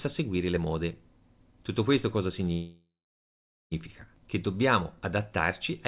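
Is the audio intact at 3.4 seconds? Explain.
No. At 3.4 s you're inside a call audio freeze running from 2.52 to 3.73 s, right after "questo cosa". The jitter buffer likely ran dry while packets were held up, so the last sound is stretched into a fading buzz, then about 0.84 s of silence. The speech then resumes roughly 1.2 s late with nothing lost.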